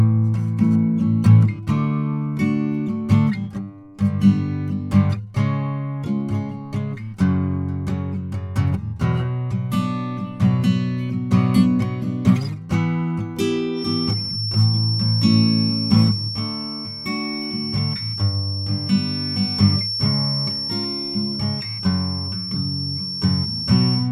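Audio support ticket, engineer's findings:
Feedback whistle from 13.71 s to end of clip. Thin, steady tone at 5.4 kHz, about 10 dB under the music, swelling and fading slowly in level. Likely cause: speaker-to-mic loop held at the edge of feedback, ringing without running away.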